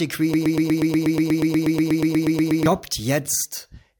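From 0.34 to 2.66 s, a broken-record loop repeats one 0.12 s fragment 19 times, likely from a stalled stream. The waveform shows identical, evenly spaced blocks.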